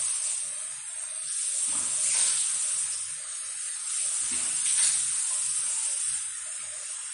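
MP3 compression runs throughout this recording of sounds: nothing survives above 10.6 kHz, and the coding damage is plainly audible. The likely cause is an encoder short of bits, which fits a low rate around 40 kbps, cutting the treble and discarding weaker frequency detail.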